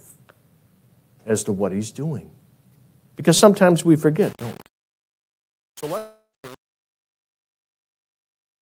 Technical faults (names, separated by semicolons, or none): repeated buffer; truncation distortion on a fade; long network dropout